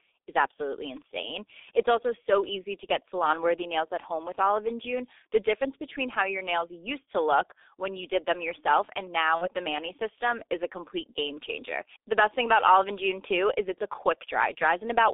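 Speech coded throughout with the G.723.1 codec: the band is confined to roughly 300 Hz to 3.6 kHz, and the heavy damage of its 6.3 kbit/s, 30 ms-frame coding leaves the voice muffled and hoarse, with smeared consonants from the slowly updated voice model. From 9.35 to 9.48 s, right after "did them yourself and", there is VoIP packet loss concealed by the speech codec. About 60 ms of audio is missing, which fits two lost frames. The decoder extends the last pitch and filter into a fading buzzy tone or coloured noise, and the voice stays weak and distorted briefly after the gap as the frame-by-frame state recovers.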